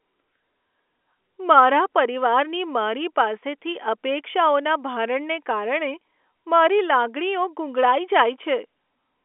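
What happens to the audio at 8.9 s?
Nothing goes wrong at 8.9 s; the speech carries on intact through that moment, still within the narrow telephone band of the G.711 line.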